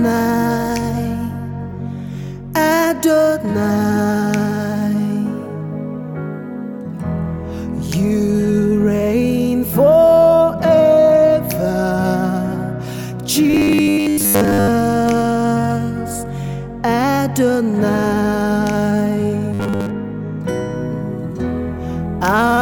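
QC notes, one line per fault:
13.51–14.68 s and 19.54–19.91 s, robotic sound from repeated short buffers: the audio turns into a rigid, metallic buzz pitched at 100 Hz that still loosely tracks the underlying sound, first for just over a second and then in a shorter burst. The likely cause is new audio arriving too slowly, so the playback repeats a 10 ms chunk over and over. Most of the material in those spans is lost, and the steady 10 ms repetition produces the fixed 100 Hz tone.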